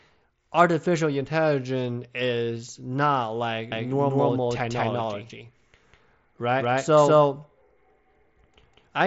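At 3.72 s, after "artificial intelligence is not", a doubled audio track begins. An equally loud copy trails about a fifth of a second behind until the end. This is likely from a second capture path. Unlike an echo, it starts abruptly and has no decay or room colour.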